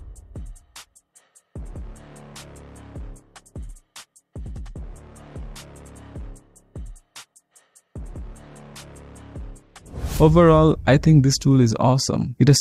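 No technical faults can be heard anywhere in this audio. There is nothing to point to at any moment in the clip.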